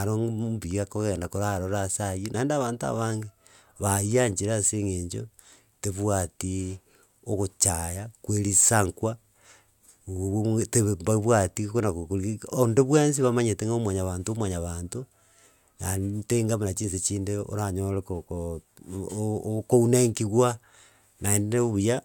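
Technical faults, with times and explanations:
Nothing stood out on listening to this speech recording.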